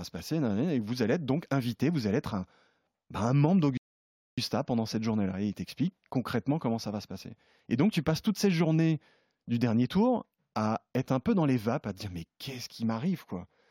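At 3.77 s the player ran out of audio, a rebuffering stall: after "ben un membre" comes 0.6 s of silence, then "pendant cette" resumes.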